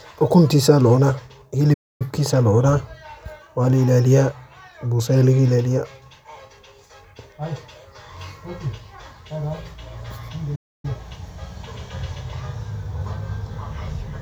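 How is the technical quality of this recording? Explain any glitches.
The speech is interrupted twice by playback stalls. From 1.73 to 2.02 s and again from 10.55 to 10.85 s, the sound cuts out mid-flow for roughly a quarter of a second before carrying on. The likely cause is the player running short of buffered data, or its thread being blocked, so output went silent until it recovered.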